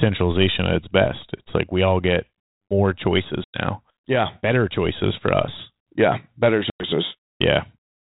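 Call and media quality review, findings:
Packet loss on an ADPCM call: hard-edged 100 ms silent gaps at 3.44–3.58 s, just after "we all get more", and 6.70–6.85 s, around five packets each. The G.726 decoder's predictor and step size desync, so audio resumes slightly distorted before settling.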